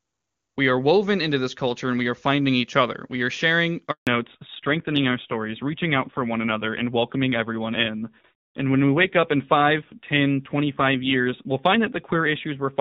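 Just after "are sharing", at 3.91 s, there's a handover gap: the call switched networks, no speech frames arrived, and the sound cuts to silence for 160 ms until the new link picks up at 4.07 s. Whatever was said in that window is simply gone.

From 4.07 s to the end there's a fallback to narrowband. The call dropped from HD Voice at a rate that points to about 24 kbit/s down to the older narrowband AMR codec, likely around 7.4 kbit/s, so everything above 4 kHz disappears. The earlier stretch sounds clean and open; after the switch the speech turns duller, boxier and a bit rough.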